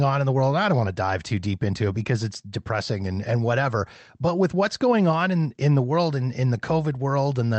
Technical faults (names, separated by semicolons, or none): none